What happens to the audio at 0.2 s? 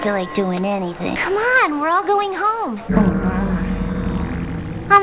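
Nothing goes wrong at 0.2 s: the audio is intact there, carried through the G.711 call path with its usual narrowband sound and nothing above 4 kHz.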